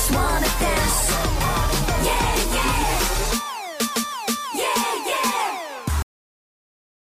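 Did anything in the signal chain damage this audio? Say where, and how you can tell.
Yes: a cut-off end at the buffer stage. At 6.02 s the sound stops mid-event and drops straight to digital silence, with no decay that a fade-out or gate would leave, because the final buffers were never written.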